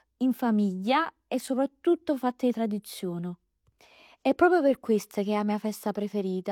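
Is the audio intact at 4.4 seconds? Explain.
No. At 4.4 seconds, as across the whole clip, the speech still carries the artefacts of an earlier lean encode, which points to HE-AAC near 40 kbit/s. It was likely re-saved as a roomy MP3 around 195 kbit/s, which restores nothing. This is low-bitrate audio saved at a high bitrate.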